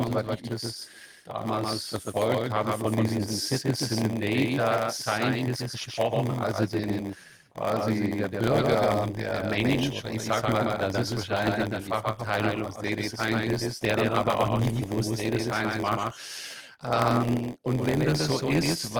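From start to finish, the speech carries a second full-band copy of itself trailing the original by roughly 150 ms and sitting about 5 dB lower. This is a doubled audio track, most likely the same signal captured twice, once through a slower path. Because the late copy has no decay and no room colour, it sounds like a hard, flat slapback on every syllable rather than a reverberant tail. It runs through the whole clip without starting or stopping.

Also present throughout is a block size mismatch (padded). One stage writes shorter blocks than the next stage reads, and each block is topped up with silence. This puts a tiny gap into every block, heard as a steady buzz at 86.1 Hz, which fits a 512-sample read buffer. The inserted gaps stretch the timing, so the speech runs at 0.938 times normal speed while its pitch stays about where it should be. Underneath both faults, the full-band Opus coding contributes only light damage of its own.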